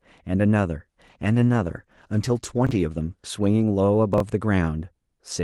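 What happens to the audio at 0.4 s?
Nothing goes wrong at 0.4 s: the speech there comes through intact, with only the ordinary band-limited character of the WebRTC call path, whose Opus coding tops out around 12 kHz.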